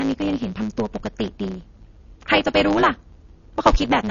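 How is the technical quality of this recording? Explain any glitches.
The technical quality is poor. Two faults run through the whole clip.

A block size mismatch (truncated) is present from start to finish. One processing stage hands over longer blocks than the next stage takes in, and the tail of every block is discarded. Those regular cuts produce a steady buzz at about 109 Hz. The speech also runs about 1.09 times too fast. Unlike a resampling error, the pitch stays roughly natural while the pace rushes, so the speed change can't be mistaken for a tape or clock fault.

Plainly audible codec damage is also present throughout. Its likely cause is MP3 compression at a very low bitrate, which fits something like 32 kbps. Nothing is present above about 6.9 kHz, where the encoder has cut the treble to save bits. Weak frequency components switch on and off between frames, giving a watery, swirling texture. 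Consonant attacks are smeared. A plain low-pass filter would dull the sound cleanly, without this shifting, metallic quality.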